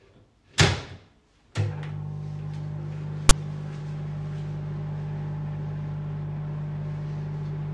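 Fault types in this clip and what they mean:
File tags played as audio: at 3.29 s, embedded text metadata is decoded as samples, producing a brief, hard-edged burst of loud, lopsided rasping static.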